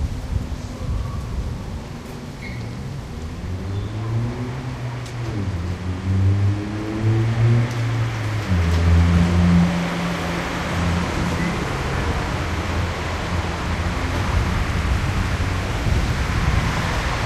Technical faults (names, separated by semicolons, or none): none